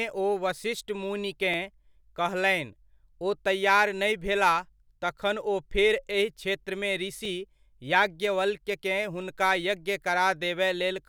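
Brief clicks in the speech at 1.54, 7.25 and 9.22 s (doubled at 9.22 s) are repeated buffers: late audio made playback replay a 5.3 ms block, which fits a 256-sample buffer.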